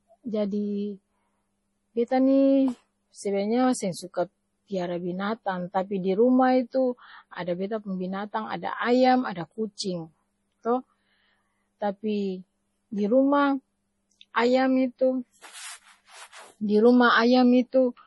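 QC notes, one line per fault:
Throughout: MP3 compression, likely at a low bitrate around 32 kbps, with heavy damage. Nothing survives above about 11.4 kHz, so the speech sounds dull and s sounds turn watery and chirpy as weak frequency lines flicker on and off between frames, and onsets smear. On a spectrogram there is a hard flat ceiling near 11.4 kHz with scattered blocky holes and isolated islands of energy below it, while the waveform looks ordinary.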